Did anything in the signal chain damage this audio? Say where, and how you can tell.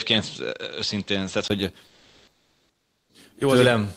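Yes. From 0 to 1.5 s the input was likely switched to a poorer device at the capture stage. Nothing reaches above 7.8 kHz, and the spectrogram shows a flat ceiling that ends at 1.5 s, with a 20 ms gap in the waveform at the switch. A different noise floor sits roughly 40 dB under the signal, and loudness stays about the same.

From 1.87 to 3.09 s, 1.22 s of comfort noise stands in place of the background. This comes from the codec's discontinuous transmission, which fits Opus DTX. Transmission likely paused and the receiver synthesised a smooth, featureless hiss about 47 dB below the loud parts and about 2 dB off the real ambience. On a spectrogram it shows as an even, texture-free band.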